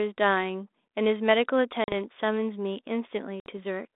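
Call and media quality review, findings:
Packet loss on the ADPCM call at 1.84–1.93 s (40 ms, a couple of packets) and 3.40–3.51 s (60 ms, about three): gaps zero-filled, then the decoder's predictor and step size lag the sender's. The speech drops to a hard-edged silence and returns slightly distorted before settling. The G.726 path runs at 32 kbit/s, band-limited to about 250 Hz to 3.7 kHz.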